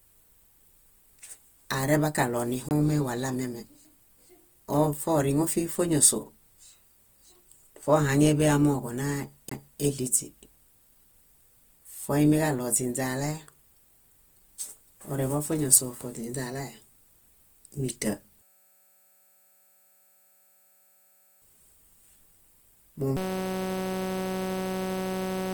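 All the way through, the speech sounds grainy and rough, with that filled-in noisy texture typical of low-rate Opus compression, likely music-mode Opus at around 24 kbps, though full bandwidth survives.

At 2.69 to 2.71 s and again at 9.49 to 9.51 s there's a CD skip: a tick and a brief mute, then playback resumes from a different spot on the disc.

From 18.42 to 21.42 s, and again from 23.17 s to the end, a system hang loop takes over. A 5.33 ms slice repeats as a steady 188 Hz buzz, which fits a 256-sample buffer, and roughly three and then two seconds of audio are lost.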